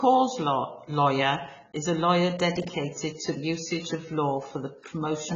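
Heavy AAC compression runs through the whole speech clip, likely from AAC-LC coding. Nothing is present above 7.8 kHz, so the top of the spectrum is simply gone and the speech sounds dull and closed-in. The coder has spent too few bits on each frame, and the damage points to a bitrate around 16 kbps. The quantisation is coarse throughout, leaving a smeared, watery texture on the sibilants and sustained sounds.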